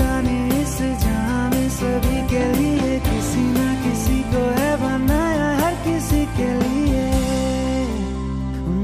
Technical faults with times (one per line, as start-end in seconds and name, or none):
none